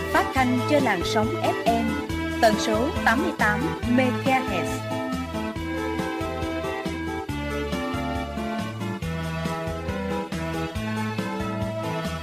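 Nothing in the audio stood out as a technical problem on listening.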